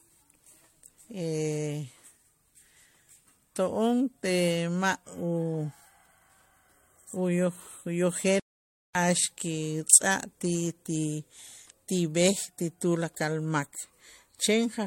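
Throughout, the speech sounds swirly, hollow and smeared, with soft attacks and nothing above 16.5 kHz. This generation loss likely comes from about four MP3 passes at 64 kbit/s, rougher than one encode. From 8.40 to 8.95 s the sound halts in mid-flow into silence for about 0.55 s, then carries on. This is a playback stall, likely a starved or blocked player.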